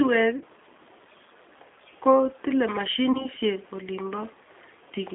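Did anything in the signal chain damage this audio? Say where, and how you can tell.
Yes. The damage comes from the codec stage. The whole clip sits in a narrow telephone band, from about 250 Hz up to 3.6 kHz, with nothing above. The speech sounds rough and slightly synthetic throughout, and that is plainly audible. This is the G.729 codec at work. It rebuilds each short frame from a vocal tract filter, a pitch predictor and a few pulses, which fits an 8 kbit/s stream.

The network stage adds VoIP packet loss concealed by the speech codec, twice. The first is at 0.38 to 0.44 s and the second at 3.12 to 3.27 s. In each, the sound is stretched into a buzzy tone or coloured noise that fades, instead of a clean gap. Each fits one lost packet carrying 30 ms of audio. The decoder guessed from its last pitch and filter, then recovered slowly because every frame builds on the previous one. That is why the second event runs well past 30 ms.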